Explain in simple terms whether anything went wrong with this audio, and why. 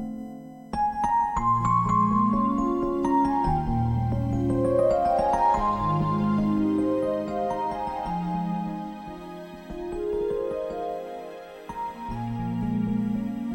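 A faint, steady whine runs underneath the sound for the whole clip. This is USB whine. The computer's USB connection draws power in bursts a thousand times a second. That leaks into the audio as a fixed tone at 1 kHz, loudest at 2 kHz.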